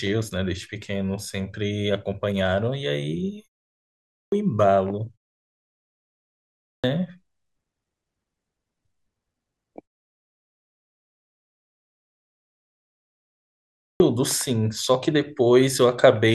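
A speech recording where the playback device drops into a low-power state during silences and needs time to wake before sound passes again, producing a clipped start after a pause three times. After gaps of 0.31 s, 1.15 s and 3.7 s, roughly 0.6 s is swallowed at 3.71 s, 6.24 s and 13.46 s (about 0.54 s in the last case), so speech resumes abruptly mid-sound, its opening missing.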